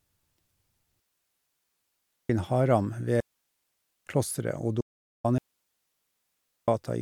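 At 1.00 s the digital wireless link stops delivering enough usable data, so the receiver mutes itself. The result is a digital wireless dropout: the speech fades out very quickly and leaves a clean hole of near silence lasting 1.3 s, until 2.30 s, with no crackle or noise burst on either side. The same receiver muting happens again from 3.20 to 4.06 s, a gap of about 0.86 s.

From 4.81 to 5.24 s the input to the recorder is cut, likely by a failed connection or a stray mute, and the recorder goes on writing silence. This audio dropout to silence removes about 0.43 s of speech. The cut comes mid-flow, and the gap has no room tone at all.

At 5.38 s the wireless link fails once more. The receiver mutes for 1.3 s, until 6.68 s, leaving the same clean, noise-free hole.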